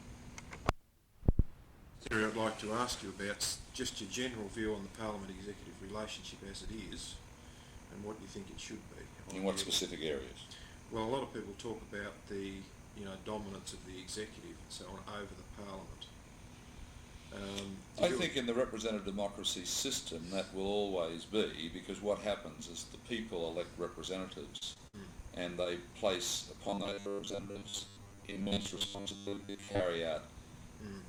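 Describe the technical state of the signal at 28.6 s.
At 28.6 s the signal has robotic sound from repeated short buffers. The fault runs from about 26.68 to 29.81 s. Across that span the sound becomes a rigid, metallic buzz fixed at 100 Hz, which fits a loop of roughly 10 ms. The likely cause is new audio arriving too seldom. The playback fills each gap by repeating the last short buffer, so much of the real audio is skipped. Most of the time in this stretch is repeated material.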